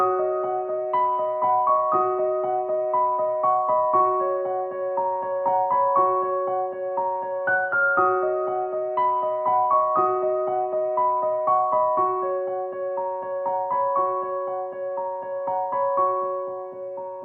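At 3.97 to 4.02 s there is a short stall from a late packet. A packet arrived after its playout time, the jitter buffer ran dry, and the receiver filled the gap by extending the last sound for about 16 ms before resuming where it left off. Nothing is lost, but playback is pushed 16 ms later from that point on. It is heard as a brief hold on the sound, with a faint buzz or dip.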